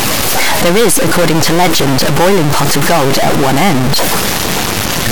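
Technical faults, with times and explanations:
Throughout, stuck bit: the speech carries added noise and distortion, and the gaps between phrases are filled with a steady hiss instead of falling quiet. This is likely one data bit held permanently at 0 or 1. Every sample whose true value differs at that bit is pushed off by a fixed step. Near silence the bit flips with the sign of tiny values, so the pauses turn into noise.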